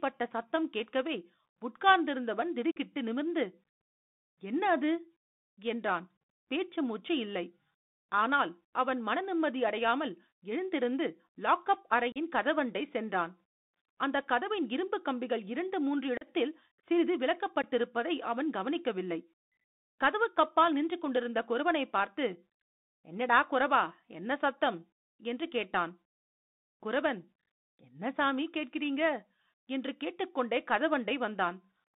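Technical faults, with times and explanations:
Throughout: Bluetooth CVSD headset codec. The speech is confined to roughly 150 Hz to 3.7 kHz, which fits a 64 kbit/s CVSD headset link. The codec tracks the waveform with one-bit up or down steps whose size adapts, so fast high-frequency energy outruns it. Sibilants come out scratchy and a fine granular hiss sits beneath the voice. On a spectrogram, nothing appears above about 3.7 kHz, and a grainy noise floor fills the band between phrases.
2.72–2.77 s, 12.12–12.18 s, 16.17–16.27 s, 17.62 s, 27.41–27.47 s: unconcealed Bluetooth headset packet loss. Short stretches of audio vanish and are replaced by silence or an idle pattern rather than being patched over. The gaps are about 45 ms, 37.5 ms, 37.5 ms, 15 ms, and 37.5 ms, which points to a handful of lost packets each time. At 27.41 s the losses are scattered over 60 ms, with the longest run 15 ms, giving a chopped crackle. 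On the waveform, each appears as an abrupt flat hole with hard edges, followed by briefly reduced level. The spectrogram shows matching vertical gaps.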